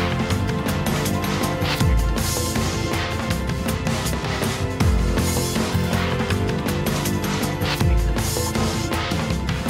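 Nothing in the audio stood out as a technical problem on listening.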